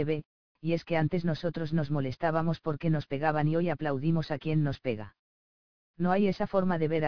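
Aliasing is present throughout. The audio was downsampled without an anti-aliasing filter, so content above the 5.5 kHz fold, which points to a rate near 11 kHz, mirrors back as unrelated tones roughly 30 dB below the signal, leaving bright sounds gritty and metallic.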